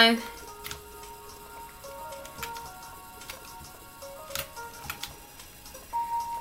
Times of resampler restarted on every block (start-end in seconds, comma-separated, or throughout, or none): none